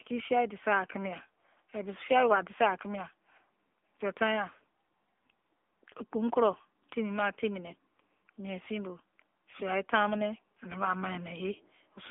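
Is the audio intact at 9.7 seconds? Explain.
No, at 9.7 s you're hearing the AMR narrowband mobile codec, which runs through the whole clip. Nothing above 3.6 kHz survives, the line band sits around 250 Hz to 3.5 kHz, and the plainly buzzy, synthetic speech points to a low bitrate near 8 kbps.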